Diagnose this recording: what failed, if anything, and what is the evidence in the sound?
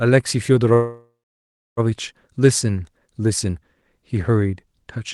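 Network and jitter-buffer stage: a call audio freeze spans 0.73 to 1.80 s. The last sound is extended as a fading buzz or hiss, then about 0.64 s of silence, likely from delayed packets emptying the buffer. Speech resumes where it stopped, about 1.04 s late, with nothing lost.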